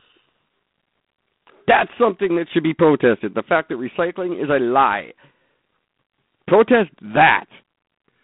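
From start to finish the speech carries G.726 ADPCM damage. Each sample is coded as a coarse difference from a prediction, fitting 24 kbit/s. A harsh, rasping hiss tracks the speech level. The band runs 150 Hz to 3.6 kHz, with nothing above 3.8 kHz.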